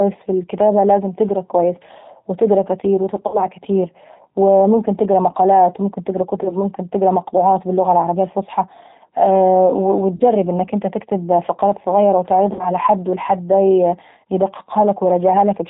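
From start to finish the speech is carried by the G.729 codec at 8 kbit/s. Nothing above 4 kHz survives. The codec rebuilds each frame from a filter, pitch and a few pulses, so the voice sounds plainly rough and synthetic.

Four gaps are concealed by the speech codec after VoIP packet loss. The first runs from 3.27 to 3.46 s, after "تقرا كويس وتقرا كاتير". About 60 ms is missing, which fits three lost packets. The decoder stretches the last sound into a fading buzzy tone or coloured noise. The voice stays weak until the frames recover. Next come 6.43 to 6.56 s, about 20 ms lost, after "تقرا مقالات وممكن تقرا"; 10.16 to 10.23 s, about 40 ms, before "انك انت تكتب فقرات"; and 12.53 to 12.70 s, about 60 ms.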